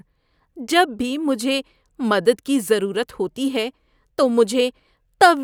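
No technical faults occur at any point in the speech, so there is nothing to describe in time order.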